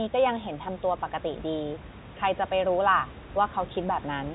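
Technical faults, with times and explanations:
Nothing goes wrong here: the speech comes down a G.711 mu-law phone line with its usual ceiling around 3.8 kHz, and some room noise sits about 17 dB below it.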